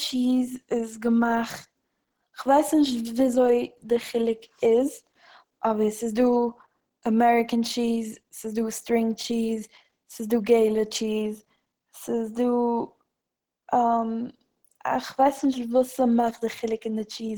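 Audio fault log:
throughout, Opus compression: speech sounds plainly hoarse and muffled, the mark of Opus's hybrid speech mode, likely near 16 kbps, though content still reaches 20.2 kHz.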